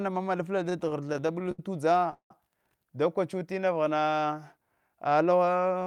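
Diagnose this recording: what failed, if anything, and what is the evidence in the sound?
Repeated stalls (stutter), 0.69 to 1.59 s just after "ma malfle", then 1.99 to 2.31 s: a network jitter-buffer fault. Late packets emptied the buffer 13, then 4 times; the receiver extended the last sound through gaps up to 168 ms, so the audio drags but nothing is lost.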